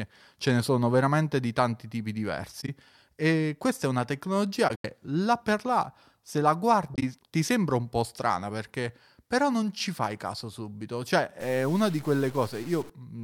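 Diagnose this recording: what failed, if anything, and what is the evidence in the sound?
The codec stage failed with corrupt frame concealed at 2.61–2.69 s, 4.68–4.85 s (just before "là per là se") and 6.94–7.03 s (between "per là se la" and "ti sembra un po'"). The decoder caught damaged AAC frames and covered them. The damaged spans are about 80, 170 and 90 ms long.

From 11.40 to 12.90 s, right after "fai caso subito cioè", the speech is distorted, and the gaps between syllables fill with noise. This is a stuck bit, likely from a broken data line or converter bit. Clipping only flattens the peaks, but here even the near-silent moments are corrupted.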